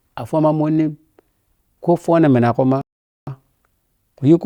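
At 2.81 s the player runs out of downloaded audio and has to wait for more data, a rebuffering stall. The speech drops to silence until 3.27 s, then resumes exactly where it stopped, losing nothing but adding about 0.46 s.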